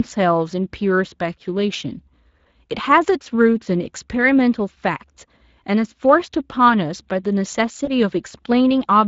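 A speech recording coded with the Speex codec throughout, with plainly audible damage. The voice sounds hoarse and grainy, as this CELP coder spends too few bits on the excitation signal to rebuild it cleanly. The roughness is consistent with a bitrate around 20 kbps. On a spectrogram, harmonics look smeared and noise fills the gaps between them. The waveform looks intact but lacks fine detail.

From 7.85 to 7.90 s there is VoIP packet loss concealed by the speech codec, consistent with one lost 20 ms frame. The decoder repeats its last pitch and filter settings at falling gain, so the sound briefly smears into a buzzy tone or coloured noise that fades. Because each frame builds on the previous one, the voice stays weak or distorted for a short while after 7.90 s. A spectrogram shows a short, flat stretch of copied harmonics, and the waveform shows a brief dip in level.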